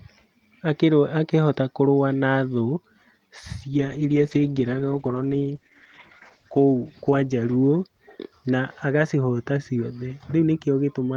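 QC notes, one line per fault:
3.78–9.19 s, call bitrate drop: the sound turns rough and muffled, consistent with the encoder's budget falling from about 48 to 13 kbps after the call's bandwidth estimate dropped. With far fewer bits, detail is coded coarsely and the high band is cut. The worst stretch lasts about 2.8 s. On a spectrogram, the upper frequencies empty out above a lowered ceiling, and the harmonics look smeared and blocky, recovering toward 9.19 s.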